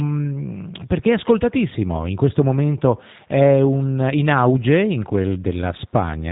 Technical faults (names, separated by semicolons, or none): G.729 codec